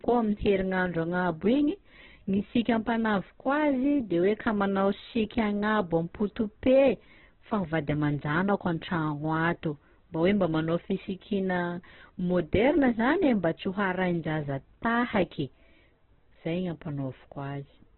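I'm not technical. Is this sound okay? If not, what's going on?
No. Throughout, the speech sounds muffled and grainy, with nothing above 4.2 kHz. That is likely heavy Opus compression squeezing the sound too hard.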